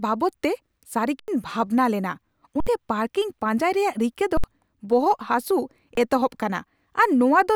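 At 1.20 s (85 ms), 2.60 s (64 ms, before "ᱯᱟᱨᱠᱤᱝ ᱯᱟᱧᱡᱟᱭ ᱨᱮᱭᱟᱜ"), 4.37 s (64 ms) and 5.95 s (21 ms), an underrun with held sample occurs. The buffer empties and the converter freezes on its last value. The waveform shows flat lines and the spectrogram shows blank strips. Each is heard as a dropout where speech went missing.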